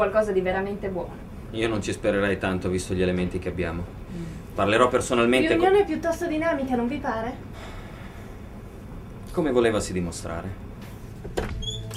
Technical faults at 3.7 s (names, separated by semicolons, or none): none